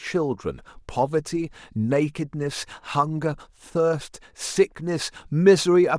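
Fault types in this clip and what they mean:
No fault types can be heard in this clip.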